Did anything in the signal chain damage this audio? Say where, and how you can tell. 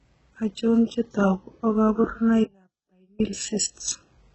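Yes. HE-AAC compression is present throughout, likely from the codec stage. Nothing reaches above 8 kHz, and the rebuilt treble sounds gritty and lispy, pointing to a rate near 8 kbps.

An audio dropout to a faint residue occurs from 2.44 to 3.20 s. The sound cuts abruptly for 760 ms, leaving only faint sound, likely a transport break.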